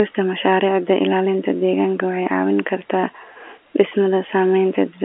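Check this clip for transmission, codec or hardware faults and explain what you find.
No faults found here.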